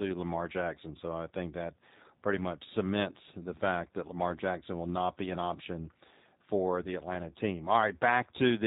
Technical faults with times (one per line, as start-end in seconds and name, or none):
0.00-8.66 G.729 codec